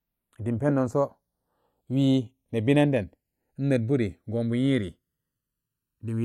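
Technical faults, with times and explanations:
Throughout, channels drifting apart: summed to mono, the speech takes on a slow, sweeping flange. The two channels run on clocks about 100 parts per million apart, so their offset creeps to under a millisecond, sliding comb notches through the spectrum.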